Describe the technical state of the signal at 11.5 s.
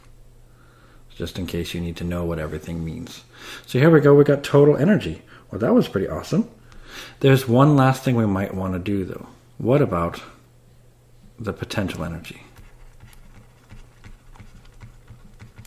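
At 11.5 s the signal is intact, with no dropout, distortion or other technical fault audible at that moment.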